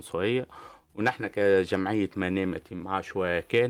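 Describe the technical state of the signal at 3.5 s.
At 3.5 s the sender's clock is running roughly 4% slower than the receiver's, so there is clock drift between sender and receiver and the jitter buffer keeps draining. To compensate, repeated timing corrections run from 0.16 to 3.65 s: the receiver keeps repeating short pieces, slowing playback to about 95% speed and adding something like 150 ms. This is heard, if at all, as slight hiccups or an unsteady tempo.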